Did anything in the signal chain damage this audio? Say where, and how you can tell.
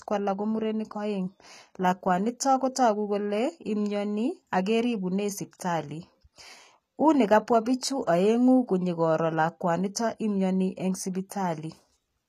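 Yes, at the codec stage: throughout this speech, the treble is plainly damaged and stops near 14.9 kHz. It's likely HE-AAC at about 20 kbps, with band replication faking the top end, so s sounds turn gritty.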